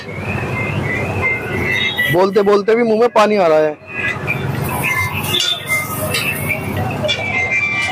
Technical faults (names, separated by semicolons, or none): Bluetooth SBC bit pool drop